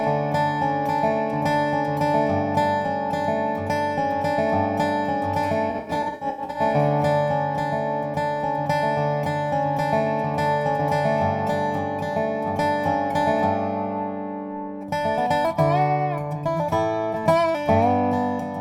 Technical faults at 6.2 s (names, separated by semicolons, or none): AAC frame loss with concealment